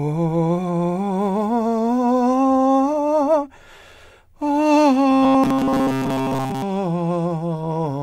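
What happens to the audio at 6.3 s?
At 6.3 s the music is inside a stretch of robotic sound from repeated short buffers, running from 5.10 s to 6.62 s. The sound collapses into a rigid, metallic buzz at a fixed 133 Hz that only loosely tracks the music. The likely cause is audio arriving too seldom, so playback fills the gaps by looping the last few milliseconds, here about 7.5 ms, while most of the real signal is skipped.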